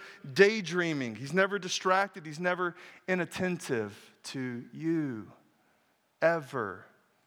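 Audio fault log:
No faults are heard anywhere in this speech.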